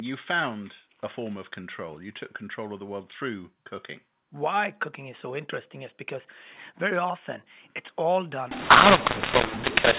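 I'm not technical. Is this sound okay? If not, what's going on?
No. From about 8.51 seconds, right after "very often it's all", until the end, the speech turns harsh and gritty, with some parts too loud, others too soft, and a hiss filling the gaps. This is a case of mu-law and A-law mixed up. The recording uses ordinary telephone coding of the mu-law kind, but that last stretch was played back as if it were the other kind, A-law, which scrambles the loudness of every moment.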